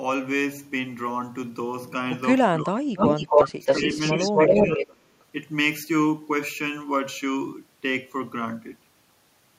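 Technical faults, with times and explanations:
2.63–4.82 s, speech suppressed in double talk: the speech dips by about 20 dB and breaks up over roughly one and a half seconds of this span. This is likely an echo canceller that met overlapping talk, could not tell near speech from loudspeaker echo, and attenuated both.
2.98–3.45 s and 3.65–4.95 s, echo leak: a copy of the speech returns 276 ms late, at a level about 5 dB above the direct speech. This is likely a loudspeaker path whose echo canceller left residual pickup in the microphone signal, which was sent back.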